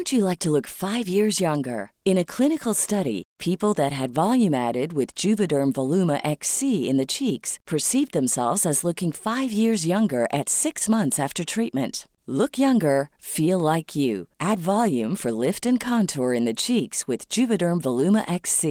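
Speech, with no technical fault to report. The Opus voice compression leaves only a light coding texture, with the full band kept, which fits its hybrid mode at around 24 kbps.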